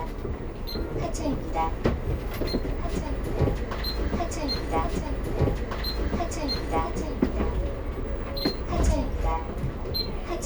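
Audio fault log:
4.83–6.83 s: stream segment repeated. A 2 s stretch of sound plays a second time. The player fetched or queued the same segment twice, so the programme steps back and repeats. A small blip marks the jump back, and the clip runs 2 s longer.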